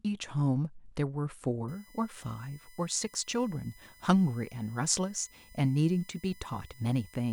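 Speech, and from 1.68 s right through to the end there's a USB whine sitting under it. It's a fixed-pitch tone built on 1 kHz, with the 2 kHz harmonic actually the loudest part, roughly 30 dB below the speech. That's the bus's 1 ms frame timing pulling current in bursts and leaking into the audio through the power or ground, so the interface's supply or grounding is where I'd look first.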